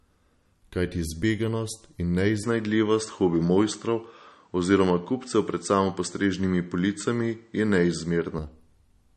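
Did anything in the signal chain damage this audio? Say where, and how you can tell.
Yes, in two places. At the codec stage, MP3 compression is plainly audible throughout. The treble stops dead at 12 kHz, and the speech has a watery, swirling quality with smeared consonant onsets. That is the signature of an encoder starved of bits, which fits a low bitrate of around 40 kbps. It removes the top band and switches weak frequency lines on and off from frame to frame. A simple filter would dull the sound without the swirl, and this artefact never lets up across the clip.

At the input stage, from 2.43 s to 8.39 s, the band narrows further, with nothing above 8.4 kHz. The sound turns duller and boxier, the level shifts by roughly 5 dB, and a faint new noise floor appears well below the speech. The switch happens with no gap of silence. The sound clears again at 8.39 s, which is why this points to the input switching to a poorer device, likely another microphone or a headset's call profile. 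The codec cannot explain it, because that damage runs through the whole clip instead of starting and stopping.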